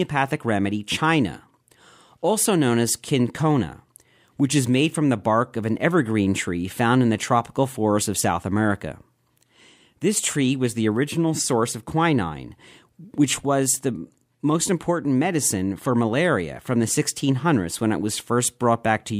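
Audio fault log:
Nothing to log here, since the speech in this clip comes through without any technical trouble a listener would notice.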